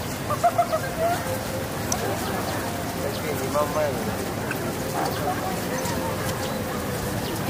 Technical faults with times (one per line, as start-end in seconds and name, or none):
1.92 electrical switching spike